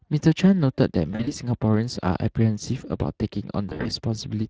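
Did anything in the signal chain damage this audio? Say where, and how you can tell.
Yes. Speex codec damage runs through the whole speech clip at the codec stage. The voice has a hoarse, noisy grain that never goes away, which is the sound of a CELP coder with too few bits to rebuild the excitation cleanly. The degree of roughness points to a Speex setting around 20 kbps, where the codec's damage is still plainly audible.

VoIP packet loss concealed by the speech codec appears at the network stage, from 1.11 to 1.33 s and again from 3.69 to 3.91 s. In each span the voice is stretched out and fades, and then recovers unsteadily. The gaps sound like roughly 100 ms and 120 ms of lost audio scattered over about 160 ms, with the longest runs lasting 40 and 60 ms. During each loss the decoder kept extrapolating the last pitch and filter while lowering the gain.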